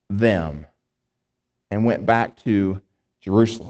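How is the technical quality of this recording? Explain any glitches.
The recording has one glitch, a lost packet rebuilt from error correction, heard over the band-limited sound of an Opus call path that stops around 8 kHz.

At 2.27 to 2.41 s, just after "and went", the audio turns briefly rougher and noisier without dropping out. Lost packets, which this sounds like about four of, were replaced by lower-bitrate copies carried in the following packets. That lack of any gap or smeared, repeated tone sets it apart from ordinary packet-loss concealment.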